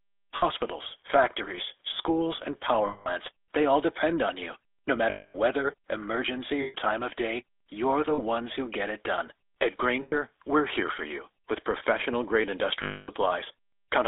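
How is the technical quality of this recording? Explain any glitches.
The recording is poor, with phone-codec roughness throughout and seven brief dropouts.

Throughout, the speech sounds buzzy and gravelly, confined to roughly 300 Hz to 3.6 kHz. This is the GSM full-rate codec, which fits 13 kbps. It rebuilds the voice from a vocal-tract model driven by coarse, regularly spaced pulses, so fine detail becomes grainy.

At 0.36–0.45, 2.86–3.10, 5.10–5.36 (just before "weather emergency"), 6.62–6.75 (between "weather emergency" and "time of day you're"), 8.14–8.20, 10.02–10.15 (before "we're here for you") and 12.82–13.10 s, the sound freezes into a metallic ring. These are lost GSM frames, 40 to 260 ms long. The decoder repeats the last good frame.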